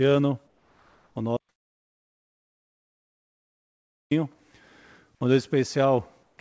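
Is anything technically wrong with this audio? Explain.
Yes. From 0.47 to 1.16 s the real background gives way to comfort noise in place of the background, and again from 6.23 to 6.38 s. The likely cause is discontinuous transmission. A detector judged the sound silent and stopped sending. The receiver then synthesised a steady, featureless hiss about 3 dB quieter. On a spectrogram these stretches show a smooth, uniform wash where the textured background was.

From 1.37 to 4.11 s there is an audio dropout to silence. The sound cuts off abruptly for about 2.7 s, with no room tone at all, then resumes mid-flow. Whatever happened in that gap is lost, likely because the input failed while silence kept being written. The waveform shows a flat line and the spectrogram shows a dark gap.

Throughout, the call codec leaves nothing above 8 kHz, which fits G.722 at 64 kbps.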